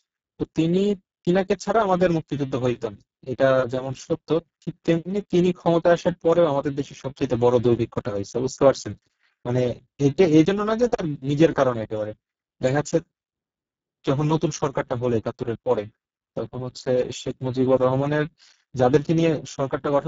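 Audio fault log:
Throughout: Speex codec damage, heavy. The speech sounds hoarse and noisy. This fits a very low bitrate of about 5.8 kbps. At that rate the CELP coder has few bits left for the excitation signal. The fine structure of the voice is lost and gets replaced by coarse, noisy pulses. The top of the band ends near 7.7 kHz. Above 4 kHz there is only a shaped hiss instead of real detail.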